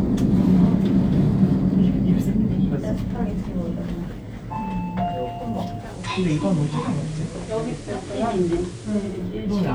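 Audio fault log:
5.75–9.27 s digital radio blending to analogue: a 323 ms cross-fade to FM adds hiss about 25 dB down at unchanged level, then reverses, unlike a plain filter.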